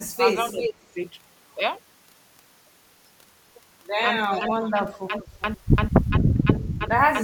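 Speech suppressed in double talk, 0.06 to 0.22 s: the voice dips by about 15 dB, likely because an echo canceller turned down its own talker while the far end was also speaking.

Echo leak, 0.15 to 0.73 s: a copy of the voice returns about 0.39 s late, only about 5 dB below the direct speech. The likely cause is a loudspeaker echo that the canceller failed to remove.

Speech suppressed in double talk again, 0.73 to 0.86 s: the voice drops by up to about 20 dB for this short stretch.

Stutter with silent gaps, 4.17 s to the end: a 0.1 s fragment repeats every 0.34 s, with 0.24 s of digital silence between repeats. The likely cause is a stalled stream replaying its last fragment on each retry, so the audio that should have played is lost.

Echo leak, 4.29 to 5.42 s: the delayed copy returns, again about 0.39 s late, now about 15 dB below the speech.

Speech suppressed in double talk, 4.73 to 5.13 s: the voice dips by about 15 dB over roughly 150 ms.

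Speech suppressed in double talk, 6.1 to 6.9 s: the voice is pulled down in pieces by about 10 dB, for about 300 ms in total.

Echo leak, 6.56 to 6.73 s: a faint scrap of echo, about 20 dB down, arrives 0.39 s after the original.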